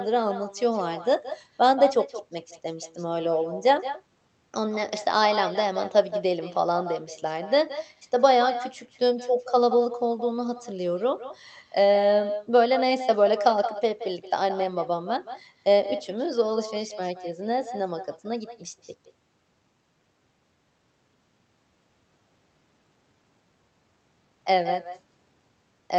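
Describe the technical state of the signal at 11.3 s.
At 11.3 s, as across the whole recording, the far end has echo with no canceller: its loudspeaker feeds its microphone, returning the talker roughly 150 ms later at about 11 dB down, a thin shadow trailing the speech through the band-limited call codec.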